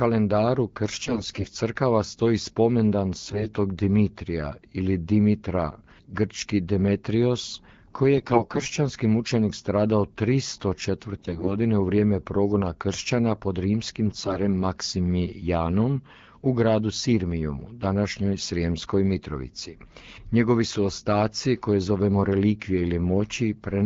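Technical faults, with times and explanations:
1.01–1.54 s, 3.19–3.47 s (just after "stoji spomendan"), 8.16–8.79 s, 11.18–11.53 s (just before "u vrijeme progona kršćana") and 14.06–14.38 s: AMR bit errors. Weakly protected bits in the wideband speech frames arrive flipped, roughly 7 to 15 percent of them, while the checked core passes, so excitation pulses and fine pitch, gain and spectral values go wrong. Pitch and level roughly hold, but the speech turns hoarse, scratchy and gargly.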